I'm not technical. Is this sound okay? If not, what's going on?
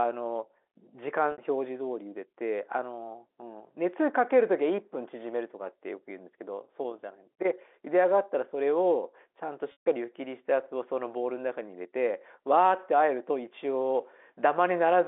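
No. At 1.32 s the speech briefly sticks on a buzzy held sound for about 60 ms, and at 9.72 s a longer 140 ms gap fades to silence before the speech returns. This is packet loss with pitch repetition: pieces went missing in transmission, and the receiver covered them by repeating the last bit of sound.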